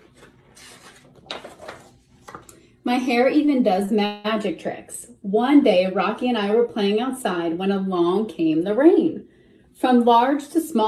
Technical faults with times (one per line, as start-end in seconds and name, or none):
3.45-3.49 short stall from a late packet
3.85-3.89 short stall from a late packet
4.05-4.26 call audio freeze